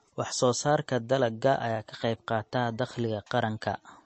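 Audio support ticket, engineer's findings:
Low-bitrate MP3 compression, likely the encoder stage, across the whole speech clip. Bit budget too small, consistent with roughly 35 kbps: treble cut off flat, nothing above 8.3 kHz; weak frequency lines dropped and restored frame to frame. Result: dull top end, watery swirl, metallic chirping on s sounds, smeared consonant attacks. Damage plainly audible throughout.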